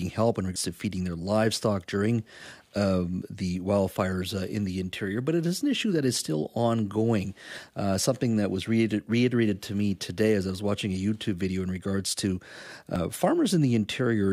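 At 0.56 s, 2.42 s and 12.96 s the speech jumps abruptly forward, skipping roughly 0.15 s, a twentieth, and a tenth respectively, with no gap of silence. This is likely a dropped buffer (overrun), where incoming samples were overwritten before being read and the remaining edges were spliced together. On a waveform each join shows a sudden discontinuity; a spectrogram shows a thin vertical broadband line where harmonics break off.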